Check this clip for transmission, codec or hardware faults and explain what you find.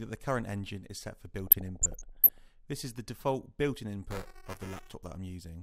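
Two faults are audible: DAB burbling early in the clip, then buffer tearing near the end.

DAB burbling runs from 1.47 to 2.38 s. The reception has weakened, and bit errors are slipping past the error correction into the MP2 audio data. Corrupted samples put short blips of noise in single sub-bands, and corrupted scale factors make sub-bands jump in level, frame by frame, across dozens of frames. The damage suggests an error rate around half a percent. It is heard as burbling over the programme.

Buffer tearing runs from 4.11 to 4.94 s. The software writing the ring buffer and the hardware reading it have drifted, so they cross inside every period. About a tenth of each buffer holds audio from roughly 7 ms earlier, with hard joins on both sides. The 375 Hz repetition fits a 128-sample buffer. It is heard as a robotic buzz at 375 Hz, present only while signal is playing.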